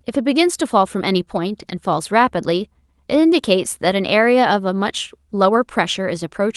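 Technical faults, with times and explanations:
No technical faults are audible in this speech recording.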